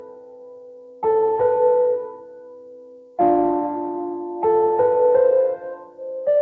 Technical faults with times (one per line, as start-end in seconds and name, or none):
0.00-6.42 noise suppressor applied to music or sounds
0.00-1.02 sound cut by the noise suppressor
2.00-3.18 sound cut by the noise suppressor
5.76-6.02 sound cut by the noise suppressor